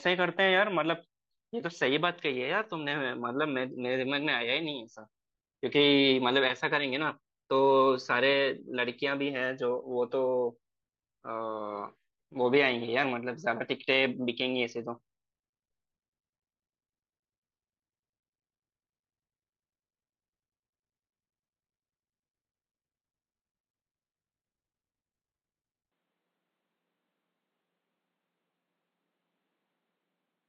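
From 25.92 s the speech turns dull and slightly quieter, with nothing above 4.6 kHz and no gap. Likely the input switched to a poorer device.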